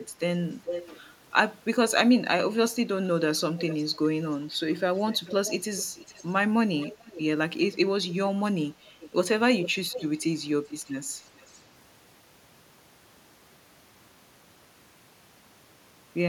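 Echo leak occurs at 0.53–1.0 s, 3.38–3.85 s, 4.96–7.2 s, 8.05–8.13 s, 9.0–10.04 s and 10.86–11.61 s. A copy of the speech returns about 0.44 s late. It is loud at first and barely audible by the end. The likely cause is a far-end echo canceller missing loudspeaker pickup.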